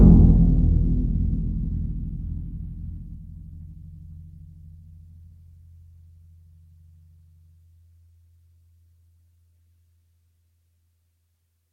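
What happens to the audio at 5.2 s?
A jitter buffer speed-up runs from 4.42 to 5.30 s: after a backlog built up, the receiver trimmed short pitch-period pieces again and again, cutting about a tenth of a second. The sound plays at 108% speed with unchanged pitch, so it feels hurried.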